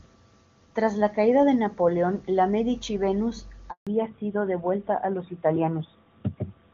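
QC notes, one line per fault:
3.71 to 3.87 s, handover gap: The speech cuts out for 160 ms. The call moved between networks, and no speech frames arrived during the switch. The sound dies within a few tens of milliseconds and stays silent. Whatever was said then is lost.
3.87 s to the end, fallback to narrowband: Nothing above 4 kHz remains. The call dropped from HD Voice to an older narrowband codec, so the voice turns duller and rougher. The clear wideband sound before fits AMR-WB at 23.85 kbit/s. The sound after fits AMR-NB at 12.2 kbit/s.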